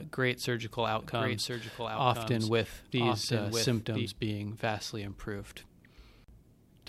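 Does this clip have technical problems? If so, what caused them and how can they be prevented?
Yes. Doubled audio track from 1.02 to 4.06 s, after "great surgical" until "being vastly improved": a dry copy about 5 dB quieter trails by about one second, likely from a second, slower capture path. Prevent it by routing only one input to the recording.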